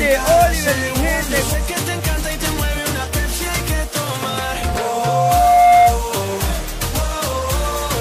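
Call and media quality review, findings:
Mic-loudspeaker loop gain above unity at 707 Hz, 4.21–6.01 s: loudspeaker feedback squeal; the tone swells over about 1.5 s to about 10 dB above the audio.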